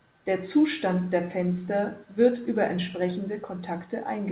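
Nothing's technically wrong with this bit of speech: it's come over a call link, and the only thing that shows is the expected ceiling, with nothing above about 4 kHz, which fits a narrowband telephone codec doing its normal job.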